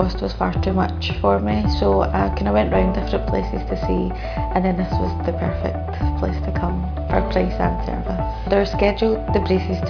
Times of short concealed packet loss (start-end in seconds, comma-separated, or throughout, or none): none